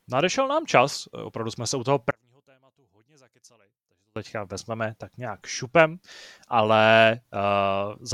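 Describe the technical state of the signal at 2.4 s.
At 2.4 s the speech has nearly vanished, about 33 dB down, from 2.11 to 4.16 s between "jsme se u toho" and "vezmeme tak nějak šupem"; likely one channel inverted, cancelling the shared centre in mono.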